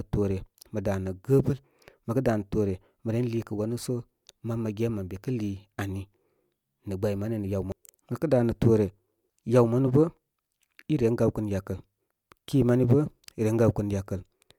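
Nothing in the recording stood out as a technical problem on listening.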